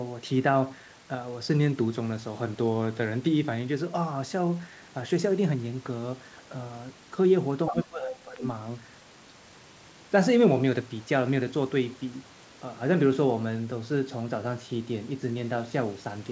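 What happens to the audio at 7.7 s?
A brief second voice cuts in at 7.67 s and lasts until 7.74 s. It is a short fragment sitting only a little below the main speech. This is the other side's voice leaking through. The far-end talker was likely playing out of the local loudspeaker and reaching the microphone, and the echo canceller failed to remove that pickup before the audio was sent on, so a scrap of it survives in the recording.

Starting at 7.7 s and running until 8.42 s, the main speech sinks. At its deepest point it drops by around 15 dB, and the damage adds up to roughly half a second within that span. This is speech suppressed in double talk. Both ends were likely talking at the same moment, and the echo canceller could not separate the local talker from the loudspeaker echo, so it pulled down everything it heard, the wanted speech included.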